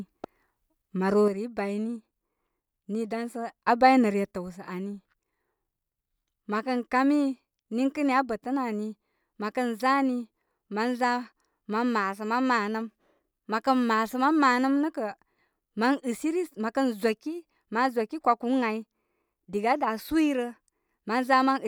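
At 1.28 s the speech abruptly drops by about 6 dB, recovers at 3.68 s, then falls again at 4.31 s and stays low to the end. This points to a likely one channel drops out fault, with the mono sum losing half its shared signal.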